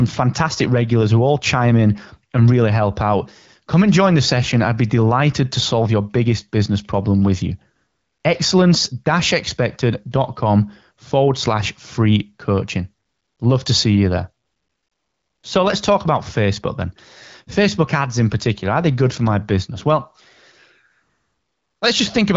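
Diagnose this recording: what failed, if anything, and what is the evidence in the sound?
The failure is AMR comfort noise from the codec's discontinuous transmission in call processing. In four pauses the real background gives way to a smooth, steady hiss: 7.75 to 8.23 s after "business problem with you", 13.05 to 13.39 s after "forward slash free coaching", 14.45 to 15.43 s after "to see you there", and 20.91 to 21.81 s. The sender classed these gaps as silence and stopped sending speech frames, and the receiver synthesized noise from a rough level and spectral description. The speech around them has the clean, band-limited sound of the AMR-WB codec at a rate of about 12.65 kbit/s.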